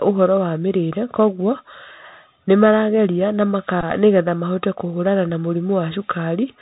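Bluetooth CVSD headset codec, throughout the speech: the sound is squeezed into the narrowband headset path, so nothing above 4 kHz survives and the damage is plainly audible. The codec sends one bit per sample, only up or down, with a step size that adapts, which fits a 64 kbps CVSD link. Loud high-frequency moments outrun the step and distort, s sounds come out scratchy, and a granular hiss sits beneath the speech.

Bluetooth headset packet repeated, from 3.81 to 3.84 s: packets between headset and phone went missing, and the chip decoded the previous packet's bits again instead of going silent. The gap covers about 15 ms of lost audio, which points to four packets in a row. Because the same 3.75 ms chunk repeats back to back, the run produces a short, steady buzz near 267 Hz until good packets resume.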